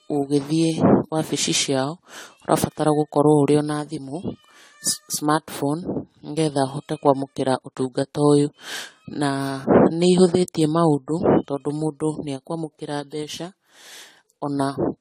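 A speech recording that carries generation loss from start to finish: the sound is swirly and hollow, consonant attacks are smeared, and the texture is more degraded than a single 64 kbit/s encode would produce. This is likely the result of repeated lossy coding, consistent with AAC-LC run around seven times in succession, each pass requantising on a shifted frame grid so noise and spectral holes build up. Content extends up to about 19.8 kHz.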